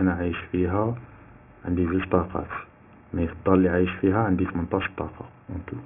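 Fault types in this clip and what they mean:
Aliasing: The speech sounds as if it was brought down to a very low sample rate, which fits a drop to 6 kHz, without a filter first removing content above half that rate. Everything above 3 kHz folds back below it onto unrelated pitches, so sibilants turn gritty and metallic throughout, with the folded energy sitting roughly 15 dB under the wanted sound. On a spectrogram the band ends hard at 3 kHz, with mirrored, inverted streaks running up to that edge.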